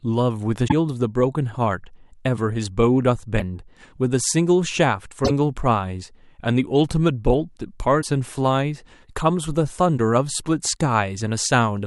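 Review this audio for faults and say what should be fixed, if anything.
The speech skips forward with a brief garbled blip at 0.67–0.72 s, 3.38–3.42 s, 5.24–5.31 s and 8.01–8.05 s, likely a broken MP3 bit reservoir: after dropped 26.1 ms frames, the next frames borrow the wrong bytes. To prevent it, cut or splice MP3 streams only at frame boundaries with reservoir-aware tools, or edit from the uncompressed source and re-encode.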